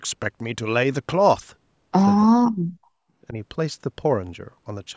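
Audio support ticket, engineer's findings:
Speech ducks hard at 2.27–2.57 s, roughly 0.3 s, and drops nearly to silence. Likely speech suppressed in double talk: the echo canceller couldn't separate near-end talk from loudspeaker echo and clamped both. The call mic processing tops out at 8 kHz, as expected.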